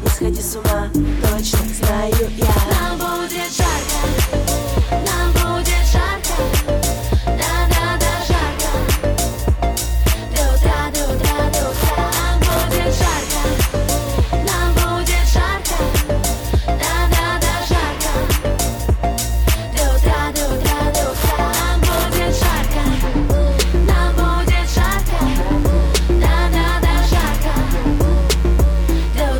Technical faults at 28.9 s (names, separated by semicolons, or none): mains buzz